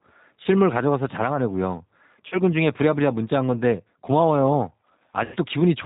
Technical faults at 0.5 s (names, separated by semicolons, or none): G.729 codec; VoIP packet loss concealed by the speech codec